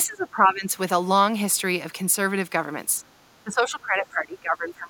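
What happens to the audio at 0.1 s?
That's speech suppressed in double talk, running from 0.06 to 0.73 s. The speech level drops away, by around 20 dB at its deepest. It's likely an echo canceller that couldn't tell the local talker from loudspeaker echo and turned both down.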